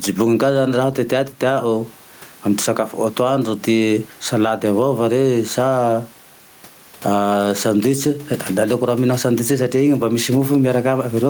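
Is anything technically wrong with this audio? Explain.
Yes. Gain pumping runs through the whole speech clip. The room noise sits about 34 dB below the speech. The gain swings by around 10 dB. The likely cause is microphone gain set far too high, with a fast limiter pulling it down on peaks. Loud and soft parts end up squashed together.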